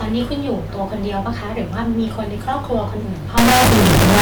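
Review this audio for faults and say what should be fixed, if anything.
Integer read as float, from 3.38 s to the end at 4.21 s: the speech gives way to an extremely loud, buzzing square wave. The data was written as 32-bit integers but decoded as 32-bit floats, so each sample's bits yield near-zero, invalid or enormous values that slam between silence and the clipping limit. To prevent it, make the reader take the sample format from the stream's header rather than assuming float.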